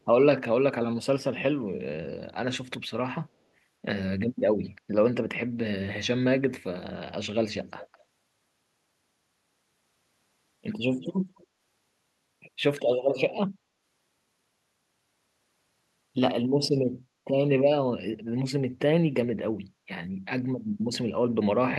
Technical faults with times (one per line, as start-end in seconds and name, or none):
7.67-7.98 echo leak
11.00-11.45 echo leak
13.09-13.15 echo leak